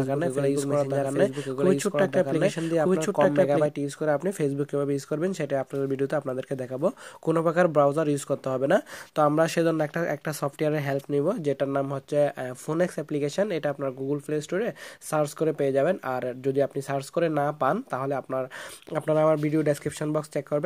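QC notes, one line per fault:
0.00–3.66 s, doubled audio track: already running when the clip opens, a second full-band copy of the sound trails the original by about a second at roughly the same level, then cuts off abruptly at 3.66 s. The likely cause is the audio being captured twice, once through a slower path. Unlike an echo or reverb tail, the copy has no decay, no room colour and no dulling, and there is only one repeat.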